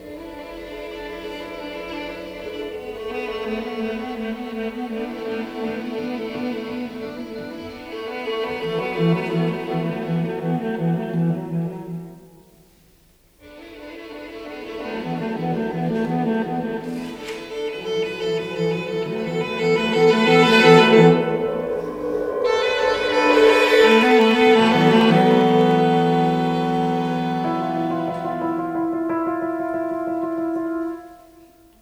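From 23.81 to 25.71 s, periodic USB or driver dropouts skip tiny slivers of audio every 0.1 s, giving evenly spaced ticks, unlike random crackle.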